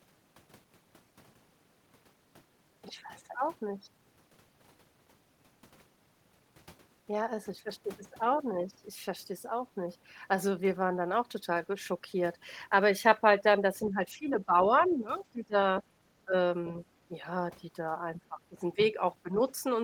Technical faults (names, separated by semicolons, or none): speech suppressed in double talk